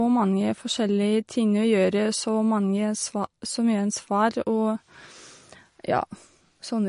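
Throughout the speech, the top end stops dead at 10.6 kHz, and sibilants carry a swirly, watery texture as weak frequency components flicker between frames. This is likely MP3 compression, with plainly audible damage that fits a starved bitrate around 40 kbps.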